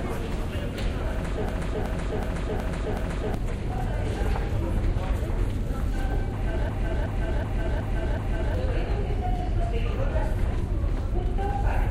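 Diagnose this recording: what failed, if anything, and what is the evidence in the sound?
System hang loop at 1.49–3.34 s and 6.69–8.55 s: a driver or buffer freeze replays one 0.37 s block five times at 2.69 Hz, fitting a 16384-sample ring buffer.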